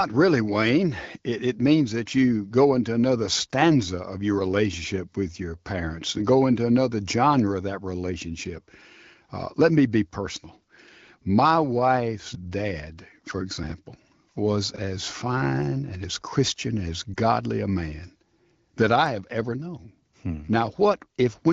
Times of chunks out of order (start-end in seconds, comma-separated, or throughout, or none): 13.63-13.72, 14.74-14.78